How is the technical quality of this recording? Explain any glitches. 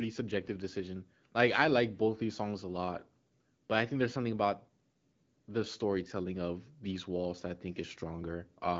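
The recording shows no technical glitches, and the speech carries only the light coding character expected of the AMR wideband (HD Voice) codec at 12.65 kbit/s.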